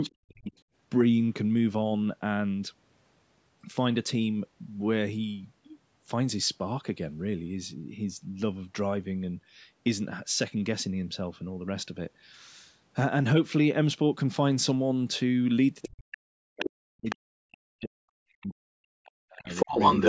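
In the first instant, from 0.02 to 0.09 s, a second voice sits faintly under the speech, well below it in level. This other side's voice leaking through is likely loudspeaker echo that the call's echo canceller left in the microphone signal. It returns at 0.57 to 0.61 s, now barely audible. Between those two moments, from 0.11 to 0.52 s, the talker's speech sinks sharply and drops out in pieces for nearly half a second, with the deepest dips nearly silent. This is speech suppressed in double talk, likely because the canceller could not tell its own talker from the echo while both sides spoke and pulled everything down.

The same pair of faults recurs near the end. From 15.84 to 19.71 s the talker's speech repeatedly sinks and breaks up, about three seconds of it affected in total. Across that stretch the leaked far-end voice breaks through at 15.82 to 16.17 s, 16.59 to 16.70 s and 17.09 to 17.16 s, each time only somewhat quieter than the speech. 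From 19.05 s to the end of the clip it is slightly louder than the talker and overrides the speech.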